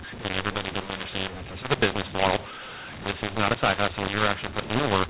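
Throughout, the speech shows mu-law and A-law mixed up. Mu-law telephone samples are decoded as A-law, scrambling levels. It sounds harsh and distorted, and pauses fill with noise.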